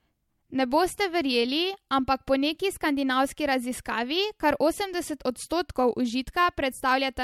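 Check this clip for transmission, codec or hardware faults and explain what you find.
Nothing to flag here: I went through the speech and didn't hear a single fault.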